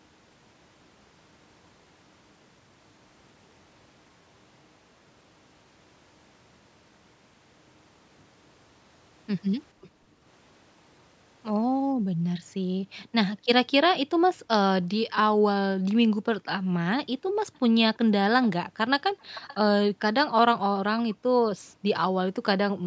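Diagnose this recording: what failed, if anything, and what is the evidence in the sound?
Call processing failed at the echo canceller, which likely let far-end loudspeaker sound leak back into the send path. A very faint echo trails the speech by about 0.49 s at 9.81 to 9.89 s, and a clearer one returns roughly 0.53 s late from 17.55 to 19.55 s.

The same echo canceller also suppressed the microphone hard while the far end was playing. The room background dips by about 33 dB at 9.90 to 10.22 s and by about 40 dB at 11.95 to 14.50, 16.08 to 17.55, 19.02 to 19.20 and 21.19 to 21.87 s, with brief dropouts before the background returns.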